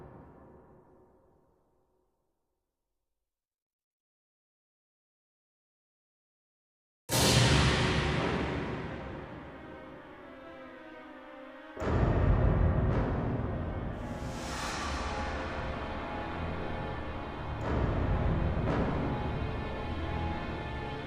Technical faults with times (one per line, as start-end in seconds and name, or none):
none